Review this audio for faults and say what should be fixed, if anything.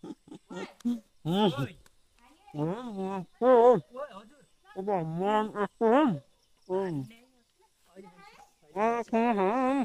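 No faults; nothing to fix.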